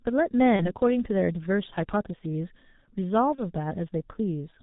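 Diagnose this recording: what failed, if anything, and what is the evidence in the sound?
The codec stage is at fault throughout: this is G.723.1 coding with heavy damage. Nothing is heard above 4 kHz, the voice is hoarse and consonants smear, which points to a low-bitrate mode near 6.3 kbit/s. Plain low-pass filtering would stay clean, not rough and slowly changing.

The network stage shows VoIP packet loss concealed by the speech codec at 0.56–0.72 s and 3.35–3.50 s. Each event fits one lost 30 ms frame: the sound stretches into a fading buzzy tone or coloured noise and stays weak briefly afterwards. A hard dropout would instead leave silence or a click.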